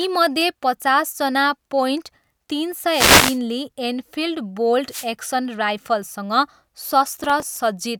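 From 2.90 to 3.39 s, after "पचासजना पोइन्ट तिन", a wireless microphone noise hit occurs. Another follows at 4.88 to 5.10 s, after "ली एनफिल्ड". Each time the radio signal fades and receiver static swishes over the speech.

From 7.13 to 7.57 s, processor overload crackle appears. Around fifteen small buffers of roughly 5 ms miss their deadlines and replay old audio. The result is a gritty, tearing crackle.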